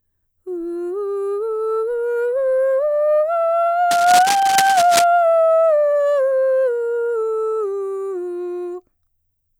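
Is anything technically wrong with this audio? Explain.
Yes. Cable scratch noise from 3.91 to 5.04 s, likely a worn connector or cable being moved so its contact flickers, lays ragged scratching bursts just under the music's level.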